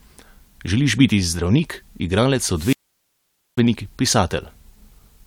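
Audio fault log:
2.51–3.65 s, wireless microphone squelch dropout: after "biti zdravnik igralec" the FM link fades, broadband hiss rises briefly, then the receiver's squelch mutes for about 0.85 s. The waveform shows a flat gap, and the spectrogram a wideband noise smear followed by an empty, dark column.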